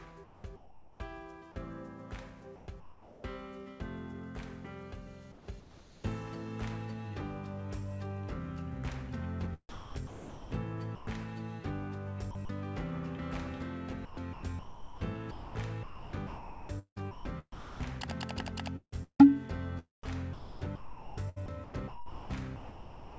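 Sound chopped by the voice detector, likely from the sender gating it, hits at 0.24–1.56, 2.56–3.24, 5.32–6.04, 9.69–11.07, 12.31–12.49, 14.05–17.80, 18.76–19.21 and 20.03 s to the end. Stretches drop out to synthetic comfort noise, so the sound gets choppy.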